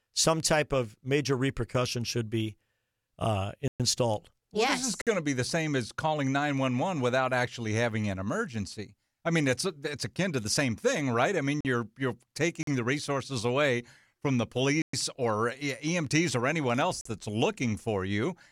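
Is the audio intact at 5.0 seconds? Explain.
No. From 5.02 to 5.07 s a block of digital silence replaces about 53 ms of samples with zeros, cutting the speech abruptly around a brief hole.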